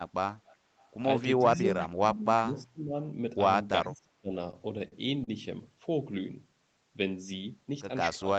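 Echo leak appears at 0.32 to 0.56 s, 0.79 to 0.89 s and 1.81 to 1.89 s as faint scraps of speech trailing the original by 375 ms. They sit roughly 25 to 35 dB below the main talker, quietest in the second burst and loudest in the third. The likely cause is a far end on loudspeaker whose echo canceller let part of its microphone pickup through and sent it back.

Speech suppressed in double talk runs from 1.57 to 2.93 s and again from 3.84 to 4.33 s. The talker's level sags and breaks up in pieces, adding up to about a second in the first stretch and under half a second in the second. The deepest dips are around 20 dB and then around 25 dB. This is likely an echo canceller that, with both sides speaking together, could not tell the talker from returning echo and pulled both down.

Repeated stalls (stutter) follow from 4.51 to 5.29 s. Six short holds break the flow, the longest 40 ms, filling 122 ms in total, about a sixth of that span. 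Late or slow packet arrival kept draining the jitter buffer, and each time the receiver stretched the last sound until fresh audio arrived. Nothing is actually lost, but the speech drags and hiccups through the passage.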